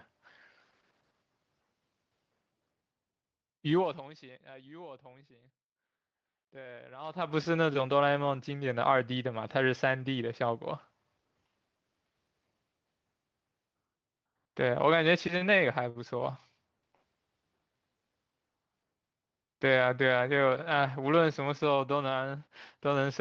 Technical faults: zipper noise; short stall from a late packet

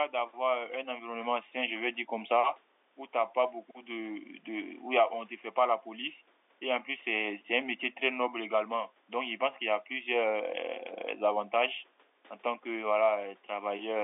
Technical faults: none

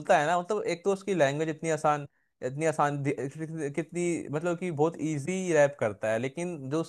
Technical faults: compressed frames skipped

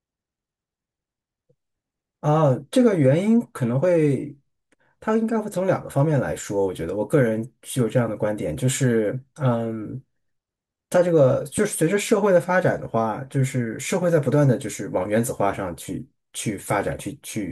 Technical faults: loud pop

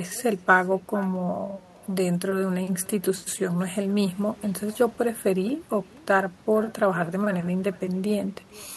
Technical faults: echo with no canceller

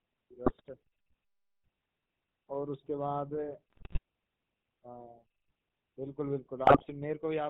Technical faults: GSM full-rate codec; GSM bit errors

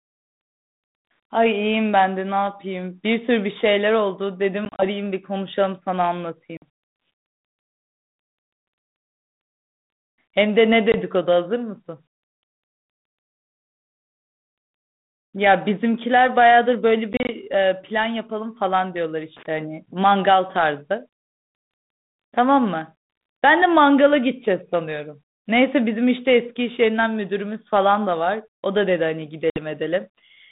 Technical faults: packet loss on an ADPCM call

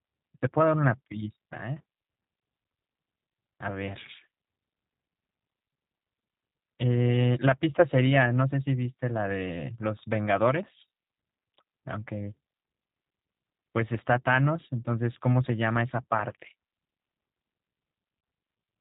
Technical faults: G.729 codec

